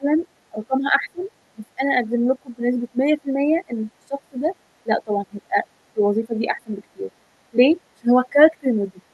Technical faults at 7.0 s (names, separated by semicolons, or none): speech suppressed in double talk